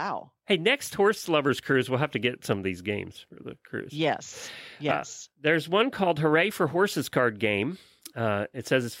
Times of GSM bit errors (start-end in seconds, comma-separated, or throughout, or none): none